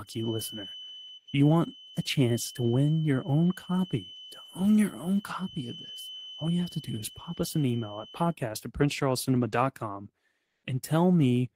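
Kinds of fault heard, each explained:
Feedback whistle: A steady 3 kHz tone sits beneath the speech, well below it in level, from the start until 8.38 s. It is likely a loudspeaker-to-microphone loop held just short of runaway. Unlike a runaway howl, it swells and fades slowly but never builds up.
Comfort noise in place of the background: For 180 ms, from 10.45 to 10.63 s, the real background, about 63 dB below the loudest speech, gives way to smooth, featureless noise with a level shift of about 5 dB, likely from discontinuous transmission such as Opus DTX. Unlike a dropout or noise gate, the gap is filled rather than silent.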